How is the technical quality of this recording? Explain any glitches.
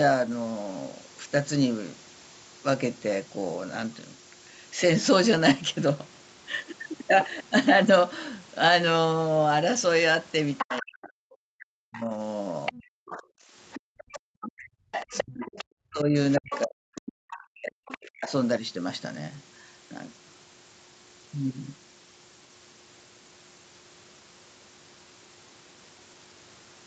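The recording has several clear faults. A constant whistle runs throughout, and the middle section shows echo-canceller trouble.

A switching supply whistle sits between 11.2 and 11.4 kHz for the whole clip. It is roughly 10 dB below the speech. A power supply is cycling at an audible rate.

Other-side voice leaking through appears from 10.58 to 10.84 s, and again from 11.97 to 18.32 s. A second voice is heard, roughly 10 dB down. This is likely loudspeaker sound the echo canceller failed to remove.

Speech suppressed in double talk occurs from 10.62 to 12.86 s and from 13.79 to 18.31 s. The main voice dips sharply, by as much as 40 dB, in pieces. This is likely the canceller turning everything down while both sides talked.

Background gated by the echo canceller occurs from 13.23 to 13.51 s. The room sound drops by about 30 dB for roughly 0.3 s. The canceller clamped the microphone while the loudspeaker played.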